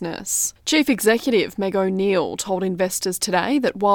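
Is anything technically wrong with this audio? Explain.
No, nothing technically wrong stood out on listening to this speech recording.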